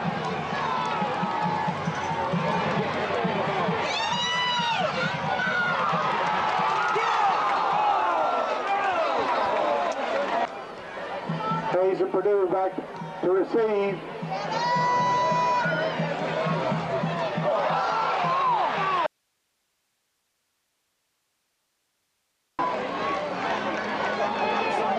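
At 19.06 s the sound cuts abruptly to faint hiss for about 3.52 s, returning at 22.59 s: an audio dropout to a faint residue, likely a lost signal feed while the downstream path stayed live. The waveform collapses to a thin band, and the spectrogram shows flat broadband noise roughly 50 dB down.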